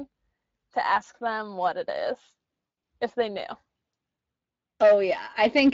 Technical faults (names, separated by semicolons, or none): Speex codec; VoIP packet loss concealed by the speech codec; hard clipping